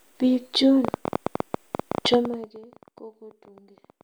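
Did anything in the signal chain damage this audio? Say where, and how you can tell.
Yes. From 0.85 s right to 4.02 s there's a train of clicks, about 11 a second on an uneven pace, some forty in all, peaking well above the speech and audible in the gaps too. That's likely interference or a struggling interface, upstream in wiring or the driver.

Between 2.14 and 2.6 s you get zipper noise: the level drops by roughly 25 dB in 1 dB jumps, around a hundred per second. That rate suggests the gain is being updated once per buffer with no smoothing, so each step leaves a small tick.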